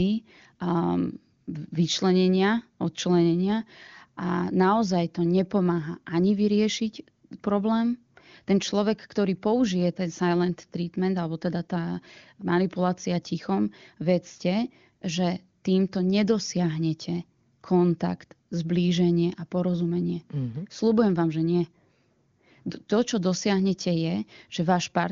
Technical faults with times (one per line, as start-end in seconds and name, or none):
none